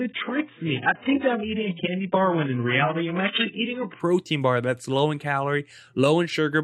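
From 0 to 4.0 s the player is on an adaptive stream starting at a low bitrate: it opened on a cheap version of the stream to start quickly and switched to a better one only after measuring the connection. Until that switch the speech has nothing above 3.8 kHz, so it sounds dull and boxy, with stronger codec artefacts that suggest a rate near 8 kbit/s. At 4.0 s full treble returns abruptly, with no gap, which fits a step up to around 96 kbit/s.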